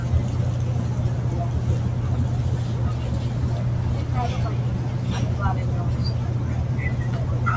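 No technical faults are audible.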